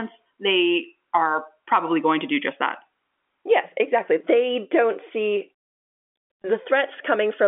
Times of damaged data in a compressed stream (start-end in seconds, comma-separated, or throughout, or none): none